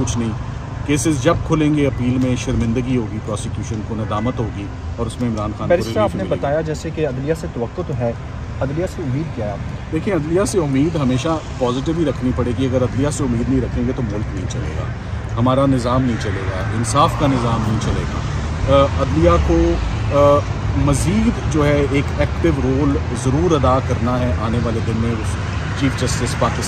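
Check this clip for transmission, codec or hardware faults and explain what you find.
One fault is present: a brief burst of hard clipping. It runs from 16.99 to 17.05 s, about 60 ms. Here the sound drove a stage past its limit by about 2 dB. The peaks that exceeded that ceiling were sliced flat instead of passing through. Those squared-off tops create harmonics high in the spectrum that the original sound never had. Because the overload is small and short, it comes across as a quick crackle on the loud moment rather than a sustained fuzz.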